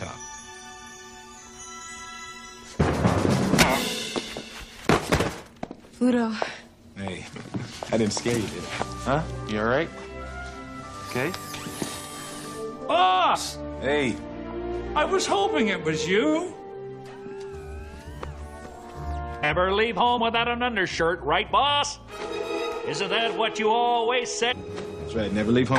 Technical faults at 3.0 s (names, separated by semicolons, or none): none